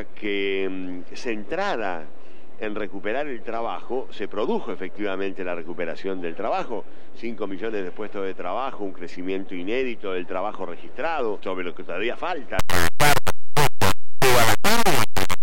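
From 12.59 s to the end, an integer read as float fault appears. The sound fits 32-bit integer samples decoded as 32-bit float, producing a harsh, extremely loud square-wave buzz.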